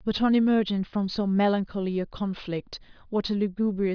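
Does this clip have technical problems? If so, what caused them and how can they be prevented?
No, there's nothing technically wrong to hear in this speech clip, so there's no cause to trace and nothing that needs preventing.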